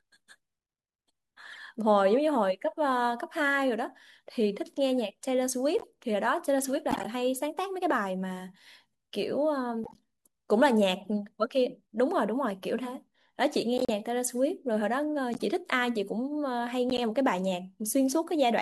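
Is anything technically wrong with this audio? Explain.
Yes. At 1.52, 5.79, 6.91, 9.84, 11.02, 13.78, 15.34 and 16.90 s, corrupt frames were decoded: damaged bits misplace energy across frequencies for a few frames, giving short chirps or noise bursts, loudest near 6.91 s.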